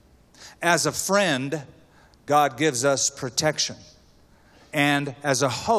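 No technical faults are audible.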